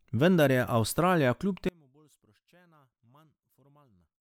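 From about 1.69 s through to the end, the speech collapses badly when you hear it in mono: the level drops by about 34 dB, so the centred voice and its low end all but disappear, leaving only a faint residue. That's the signature of one channel inverted, likely one side of the stereo pair flipped in polarity, so the material common to both channels cancels as soon as they're summed.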